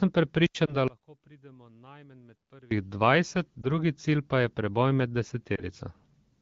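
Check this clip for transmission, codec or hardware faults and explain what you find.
Three kinds of fault turn up in this speech clip: a wireless microphone squelch dropout, three short lost AMR speech frames, and a long stretch where the level collapses in a way that points to one channel inverted.

From 0.44 to 0.55 s there is a wireless microphone squelch dropout. The analogue FM radio link from the microphone fades far enough that the receiver's squelch closes and mutes its output. Hiss rises briefly, the sound then drops into a hole of near silence for about 85 ms, and the audio comes back as the squelch reopens.

Lost AMR speech frames occur at 0.65 to 0.76 s, 3.62 to 3.67 s and 5.55 to 5.63 s. Radio errors corrupted coded frames, so the AMR-WB decoder, running at 12.65 kbit/s, filled each gap by reusing the previous pitch and vocal tract settings at reduced gain. Each event is heard as a short dip or warble, which fits a single 20 ms frame being concealed, and the speech recovers slightly weak or rough for a moment afterwards.

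From 0.88 to 2.71 s the level drops by about 28 dB and what remains sounds faint, with the centred content largely gone. The likely cause is one channel inverted: one stereo channel has reversed polarity, so when the two are summed to mono, everything common to both cancels. Only the small difference between the channels survives, which is why the speech does not disappear entirely.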